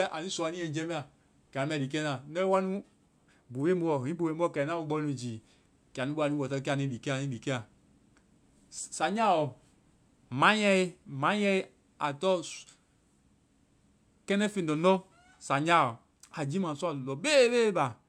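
No technical faults can be heard anywhere in the speech recording.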